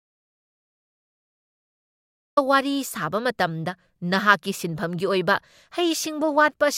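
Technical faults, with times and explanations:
0.00 to 2.37 s, audio dropout to silence: The clip opens in complete silence, and speech only comes in at 2.37 s, already mid-flow. The gap holds nothing at all, not even room tone. That points to a real dropout, not a quiet passage. The likely cause is a lost input, such as a disconnected device, a failed link or a mute, while recording went on. Whatever was said before 2.37 s is gone.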